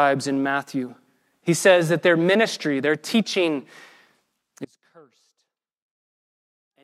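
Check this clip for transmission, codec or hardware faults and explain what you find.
One fault is present. From 4.65 s to the end, an audio dropout to a faint residue, likely a lost feed with the path still live, leaves sound roughly 30 dB down, cut abruptly rather than faded.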